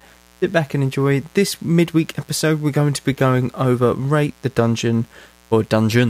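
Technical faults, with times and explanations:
Throughout, mains buzz: a steady, raspy 60 Hz buzz sits under the speech, roughly 35 dB below it. Sharp interference spikes arrive twice per mains cycle. Their many harmonics stretch into the kilohertz range, giving the edge a plain hum lacks.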